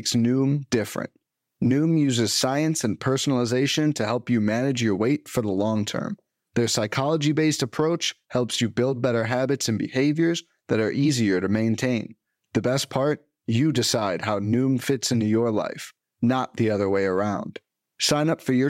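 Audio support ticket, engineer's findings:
Engineer's findings: no audio fault found in the speech recording, nothing to action on this ticket.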